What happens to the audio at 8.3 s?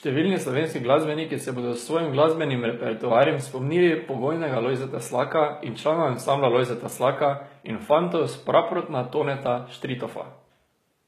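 At 8.3 s you're hearing the same thing that runs through the whole speech clip: HE-AAC compression damage, and it's plainly audible. The top end sounds synthetic, because the treble is rebuilt from copied-up lower bands rather than carried through, so sibilants come out gritty and lispy. Nothing survives above 14.9 kHz, and the coarseness points to a very low rate, likely HE-AAC v2 at around 20 kbps.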